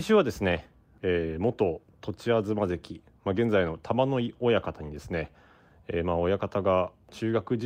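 Nothing goes wrong anywhere in this bit of speech, so there's no technical fault to point out.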